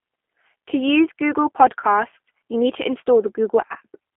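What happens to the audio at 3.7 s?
At 3.67 to 3.76 s there is VoIP packet loss concealed by the speech codec. About 30 ms of audio went missing, consistent with a single lost packet. The decoder filled the gap by extending its last pitch and vocal-tract filter at falling gain, so the sound smears into a brief buzzy tone or coloured noise that fades. Because each frame builds on the previous one, the distortion lingers until about 3.76 s, beyond the lost span itself.

This happens within the G.729 codec coloration present throughout the clip. The 8 kbit/s G.729A coding confines the audio to roughly 250 Hz to 3.5 kHz and rebuilds it from a filter, pitch predictor and sparse pulses. This gives plainly audible roughness and a slightly synthetic quality, which also shapes how the concealed segment sounds.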